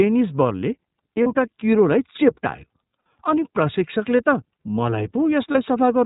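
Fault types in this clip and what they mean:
iLBC codec: The whole clip passes through a narrowband VoIP coder, so nothing above 4 kHz survives. Each frame is coded on its own. The damage is plainly audible. Speech is clear but rough and synthetic, which fits the 13.33 kbps, 30 ms mode.
lost iLBC frames: Three brief gaps occur, at 1.23 to 1.27 s, 2.99 to 3.05 s, and 5.52 to 5.56 s. The decoder repeats the last pitch cycle mixed with noise, heard as a short, buzzy held vowel. The voice returns to normal almost at once.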